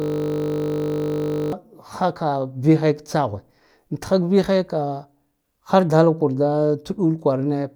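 The speech opens already caught in a system hang loop, from 0.0 s to 1.53 s. The machine or its audio driver stalled while the sound hardware kept replaying the same 20 ms slice of its ring buffer. That slice repeats exactly, about 75 times. Because the loop is so short, it does not stutter. It fuses into a steady, flat buzz at 50 Hz, the loop rate. Normal playback resumes when the system recovers.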